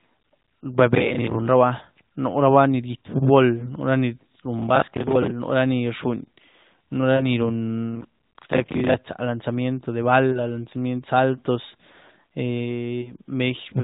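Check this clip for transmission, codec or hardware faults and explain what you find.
Two kinds of fault turn up here: a few lost AMR speech frames scattered through the clip, and one burst of processor overload crackle. All of it rides on an AMR narrowband mobile codec path with a 4 kHz ceiling and a lightly synthetic edge, which fits the top 12.2 kbps mode.

The lost AMR speech frames come at 3.60 to 3.74 s, 7.16 to 7.23 s, 10.32 to 10.53 s and 13.02 to 13.14 s. Radio errors corrupt a frame so it fails its check, and the decoder papers over the hole by repeating the last good pitch and vocal tract settings at lower gain. Most of these sound like a single 20 ms frame going missing, a quick dip with a bit of warble. The one at 7.16 s is closer to 40 ms, so it smears a little longer before the audio comes back slightly thin.

The processor overload crackle runs from 4.59 to 5.31 s. The machine couldn't finish its small audio buffers on time, which fits buffers of around 10 ms, and it missed a few dozen deadlines back to back. 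Each miss replayed a scrap of old audio with hard edges, so you get a gritty, tearing crackle laid over the sound for most of a second, and it stops once the load eases.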